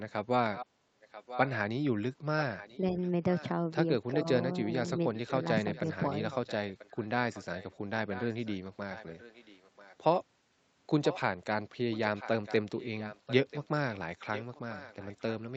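Right from 0.53 to 1.51 s there's an echo leak: a faint copy of the talker coming back about 0.99 s late, sitting roughly 10 to 15 dB under the live sound. It's most likely a loudspeaker on the far end whose echo canceller let some of its mic pickup slip through and sent it back. It returns at 2.39–3.46 s, 4.76–9.96 s, briefly at 11.03–11.21 s, and from 11.91 s to the end.

Overlapping that second stretch at 2.92–2.97 s, and again at 4.13–4.67 s, there's speech suppressed in double talk. The talker ducks by around 5 dB for short moments, which is likely the echo canceller mistaking live talk for echo while both sides overlap and pulling everything down.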